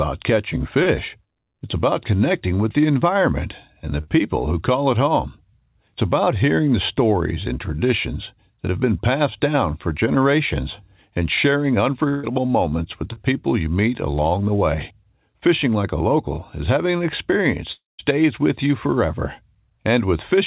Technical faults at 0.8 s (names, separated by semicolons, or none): short concealed packet loss